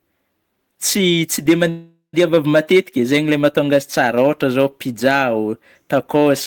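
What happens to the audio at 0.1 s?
At 0.1 s the speech is hard clipped, as throughout: peaks driven about 6 dB past the limit are sliced flat, giving brief crackle on loud moments rather than a continuous, rounded saturation fuzz.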